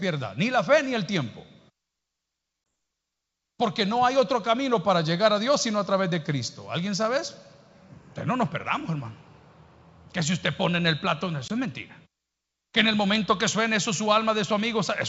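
A 20 ms hard-edged gap at 2.71 s and again at 11.48 s, each followed by slightly distorted speech: packet loss on an ADPCM call, where a single lost packet knocks the decoder's predictor out of step.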